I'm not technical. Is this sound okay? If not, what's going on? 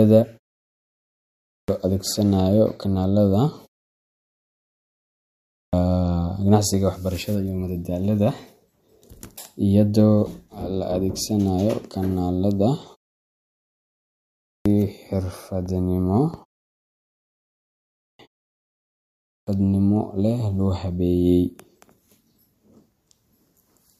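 No. The speech has a clipped start after a pause, five times: at 1.31, 5.38, 14.30, 17.80 and 19.10 seconds. Each comes after a quiet gap of about one to two seconds, and each time the first 0.35 to 0.40 seconds of sound is lost, so speech begins abruptly, missing its opening. The playback device powers down during silence and is slow to wake.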